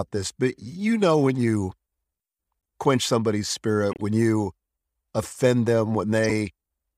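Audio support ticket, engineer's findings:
Short chirp/noise bursts in speech at three points: 3.91–4.03 s, right after "quench somebody's", peaking around -20 dBFS; 5.22–5.26 s, similar level; 6.24–6.31 s, louder, near -10 dBFS. Spans fit a handful of damaged frames each. Probable component: decoder path, corrupt frame decoded. Flipped bits in the compressed frames were played rather than concealed, so misread gains and codes put energy at wrong frequencies for the damaged frames.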